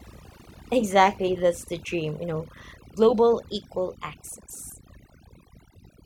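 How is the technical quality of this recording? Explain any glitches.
The quality is poor, because overdone noise removal runs through the whole recording. A noise reduction stage set far too strong pulls individual frequency bands down to nothing whenever they sit near its noise estimate. Quiet parts of the speech vanish with them, leaving near-silent gaps with twinkling specks. Those isolated specks in the pauses, rather than smeared or pre-echoing detail, set it apart from a low-bitrate codec.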